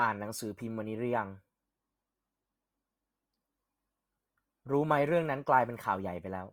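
Speech with grainy, rough, noisy texture throughout rather than MP3-style swirling, likely Opus compression in CELT mode at fullband, which fits roughly 24 kbps.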